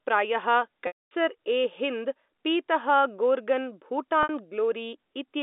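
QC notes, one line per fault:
0.87–1.11 s and 4.23–4.29 s, packet loss with pitch repetition: audio drops out and the receiver fills the hole by looping the last pitch period. The 240 ms gap is long enough that the repeat fades to silence over about 50 ms before the sound cross-fades back. The 60 ms gap just comes across as a brief held, buzzy tone. Both lengths suggest 30 ms packets, heard through the 250–3,700 Hz telephone band of the G.711 line.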